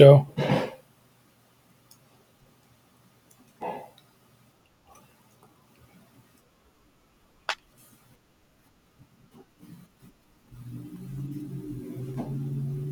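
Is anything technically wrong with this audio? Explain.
Yes. Clock drift buffer slips: clicks every 0.66 s from 0.34 s to 12.80 s, likely two clocks about 500 ppm apart dropping or repeating small blocks of samples.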